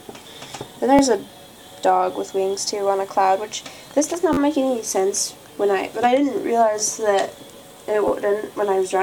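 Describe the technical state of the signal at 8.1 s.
A repeated buffer fault occurs from 8.08 to 8.10 s. New audio arrived late, so the same 11.6 ms block played two extra times, which fits a 512-sample buffer. The hard joins make a brief buzzy click. No audio is skipped.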